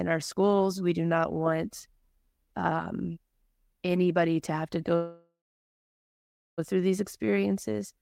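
Speech with a call audio freeze from 4.95 to 6.60 s: the last sound is stretched as a buzz or hiss that fades to about 1.2 s of silence, then resumes intact, 1.6 s late, likely from delayed packets draining the jitter buffer.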